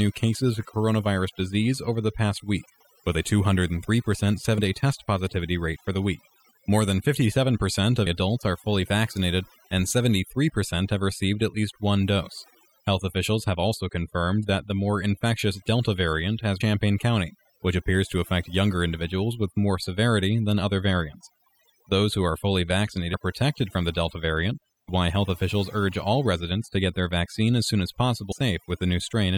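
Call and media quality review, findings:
Overdone noise removal, whole clip: background drops and breaks into twinkly specks. Denoiser set way too hard, knocking individual bands down whenever they sit near its noise estimate and taking the quiet bits of speech along with them.

Compressed frames skipped, six spots: 4.57 s (before "day test positivity rate", roughly 70 ms gone), 8.05 s (~0.4 s), 16.60 s (after "variant has", ~0.4 s), 23.13 s (~0.2 s), 24.88 s (before "why health officials urge", ~0.3 s), 28.31 s (~0.5 s). Decoder dropping whole frames, which fits 24 ms frames.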